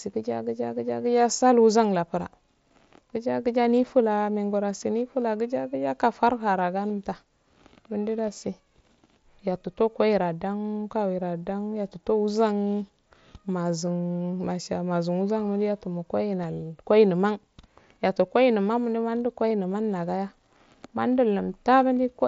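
Voice packets between headset and phone dropped out around 6.89 s, just after "nifula gija gija kafarhara", and again at 19.49 s. This is concealed Bluetooth headset packet loss. The receiver filled each gap of about 15 ms, which suggests a couple of lost frames, by repeating recent waveform over the mSBC wideband link, so each loss sounds like a brief buzzy held tone with a small warble where real audio returns.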